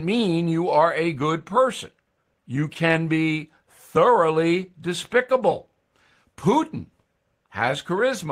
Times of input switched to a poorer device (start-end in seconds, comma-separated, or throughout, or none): none